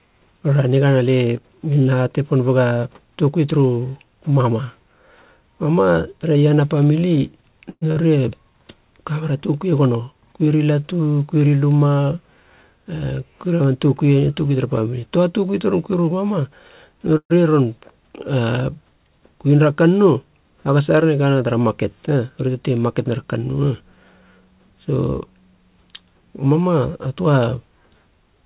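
Speech carried over a narrowband call line, with nothing above 4 kHz, as G.711 mu-law coding would give, has two kinds of playback fault and one packet-loss burst. The first call audio freeze runs from 7.70 to 7.83 s. The last sound is stretched into a fading buzz or hiss for about 114 ms, ending in roughly 50 ms of silence. The second runs from 17.17 to 17.32 s, about 128 ms long with about 70 ms silent. Both were likely caused by delayed packets draining the jitter buffer. Speech then resumes exactly where it stopped, so a pause is inserted and nothing is lost. On a spectrogram each freeze shows smeared, repeating bands that fade to a blank column. In the waveform the envelope decays into a flat stretch. Just after, at 7.91 to 7.98 s, a burst of packet loss fills about 48 ms with a decaying copy of the preceding sound and drops about 40 ms outright. Speech restarts slightly further on, so the spectrogram shows a faded patch and then an abrupt jump in formant positions. 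Two jitter buffer speed-ups compress the audio at unchanged pitch by cutting out pitch-period-sized pieces. The first, from 12.11 to 12.95 s, plays at 112% and removes about a tenth of a second. The second, from 22.48 to 23.98 s, plays at 109% and removes about 150 ms. Both sound hurried, and on a spectrogram the harmonic spacing stays fixed while syllables and gaps appear squeezed in time.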